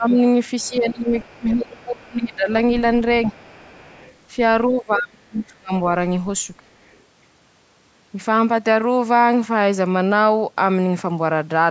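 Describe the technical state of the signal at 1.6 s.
At 1.6 s the echo canceller, likely caught in double talk, turned the talker down along with the echo, so speech suppressed in double talk dips by as much as about 25 dB between 0.0 and 2.49 s. In the same moment its likely incomplete echo removal lets the other side's voice leak through, a faint second voice about 30 dB below the speech from 0.59 to 2.35 s.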